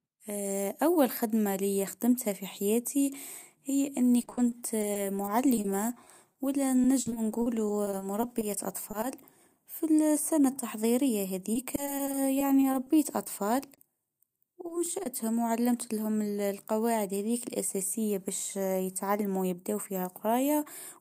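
From 4.21 to 9.04 s, just after "في حياتي هي إني", packets kept arriving late or not at all. This is repeated packet loss (robotic sound). The receiver patched a couple of dozen holes, each up to 40 ms, by extending the previous sound, covering about 11% of the stretch. The speech turns choppy. The same repeated packet loss returns from 11.54 to 13.80 s, with about a dozen shorter gaps of up to 20 ms and the same robotic texture.

Two short concealed packet losses follow, at 14.68 to 14.72 s and at 15.04 to 15.08 s, the second just before "و علمتلهم القواعد هذيك". In each, about 20 ms never reached the decoder and was filled from the preceding sound. Each leaves a brief smear or wobble.

From 18.13 to 18.81 s, a jitter buffer speed-up trims the backlog. Small pitch-period slices totalling a few hundredths of a second are cut out, so the speech runs at about 105% speed with unchanged pitch and sounds slightly hurried.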